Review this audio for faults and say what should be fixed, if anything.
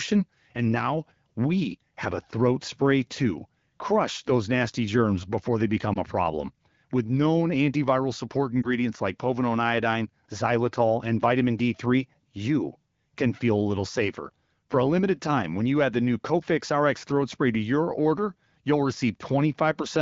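Two brief lost AMR speech frames: 5.94 to 5.98 s, between "nasty germs before they" and "a problem", and 8.62 to 8.70 s, after "known antiviral support" and before "like povidone iodine xylitol". Each sounds like a short dip or warble, consistent with a single 20 ms frame failing its checksum. The AMR-WB decoder filled the gap by replaying the last good pitch and vocal-tract settings at reduced gain. Unlike a hard dropout or click, there is no abrupt silence, just a moment where the voice comes back weak or rough as the speech recovers. The surrounding HD Voice sound points to a mid-to-high wideband rate. To prevent this, strengthen the radio link or its error protection so fewer frames arrive corrupted.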